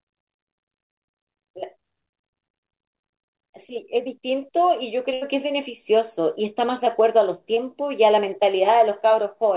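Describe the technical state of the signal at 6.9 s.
Right around there, from 6.85 to 6.88 s, there's a short concealed packet loss. Roughly 20 ms of the speech didn't reach the decoder in time, and the receiver papered over the hole by extending the last bit of sound for about 11 ms before blending back into the real signal. You hear it as a tiny smear or wobble. The whole thing sits in the 4 kHz-limited band you'd expect from a G.711 mu-law call path.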